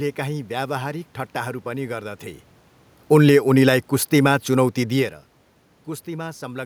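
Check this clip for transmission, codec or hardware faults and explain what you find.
One fault shows up: automatic gain falling. From 2.97 s to 5.1 s the speech fades by about 4 dB, and the room noise underneath drops right along with it. The whole recording dims, not just the voice. The automatic gain control judged the input too loud, or its background noise too strong, and lowered its gain gradually across that stretch.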